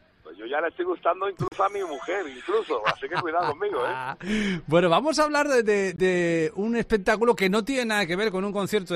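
Bluetooth dropouts at 1.48–1.52 s and 5.96–5.98 s cut the audio to silence, likely from late packets discarded before playback, which resumes further on.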